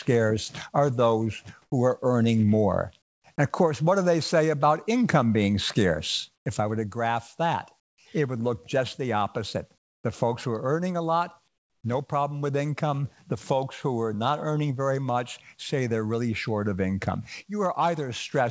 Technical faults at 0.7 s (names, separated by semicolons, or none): none